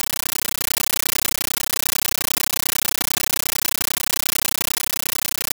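From the first instant to the end, the speech is replaced by a compressed stream played as audio: an undecoded AC-3 bitstream taken for ordinary samples, consistent with a 640 kbps Dolby Digital feed. Each frame becomes a 13.3 ms blast of noise followed by zero padding, repeating 31.25 times a second. Unlike steady hiss or random digital crackle, it is a loud, rhythmic chattering static with regular gaps, and none of the underlying sound survives.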